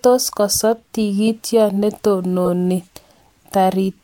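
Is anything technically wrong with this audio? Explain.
Yes. There are two corrupt frames decoded, at 1.27 s and from 2.45 to 2.48 s. Each time, bits in a single compressed frame were flipped and the decoder played it anyway. The misread data puts energy at wrong frequencies. Each is heard as a short chirp, squeak, blip or burst of noise, the second one louder.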